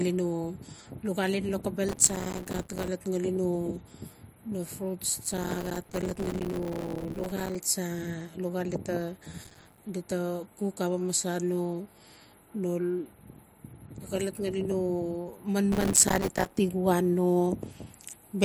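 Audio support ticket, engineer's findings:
Processor overload crackle at 1.89–2.88 s, 5.24–7.55 s, 9.44–9.78 s, 15.72–16.58 s. Gritty tearing over the speech, longest run mid-clip. Probable component: audio processing thread or host CPU. Mechanism: many buffer deadlines missed in quick succession. Each miss drops a tiny slice to silence with hard edges. The dense rapid dropouts fit a buffer of a few milliseconds. Crackle clears when load eases.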